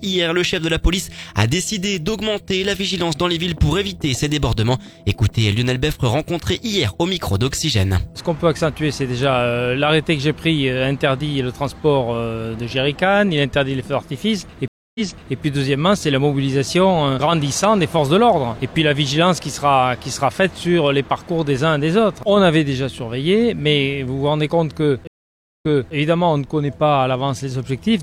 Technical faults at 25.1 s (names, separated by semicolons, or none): stream reconnect